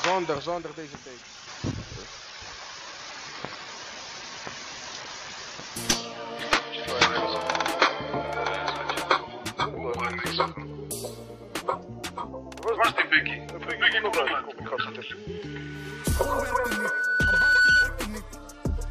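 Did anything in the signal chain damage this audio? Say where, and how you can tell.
Yes: loudspeaker feedback squeal at the microphone-to-speaker loop, 15.45–18.01 s. A 1.5 kHz tone swells over about two seconds to roughly 10 dB above the sound, unlike a steady interfering tone.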